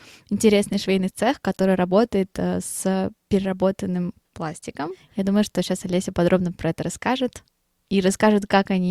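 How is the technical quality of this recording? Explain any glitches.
The signal holds steady throughout, with no audible glitches or technical faults in the recording.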